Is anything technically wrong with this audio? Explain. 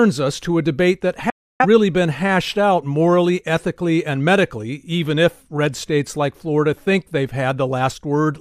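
Yes. From 1.30 to 1.66 s, just after "to a debate that", the speech cuts abruptly to silence, with only a 3 ms fade, and resumes at "been hashed out morally". This is a digital broadcast dropout: the receiver lost a run of frames, which fits about seven bad frames, and muted until good ones arrived, so roughly 0.3 s of programme is simply missing.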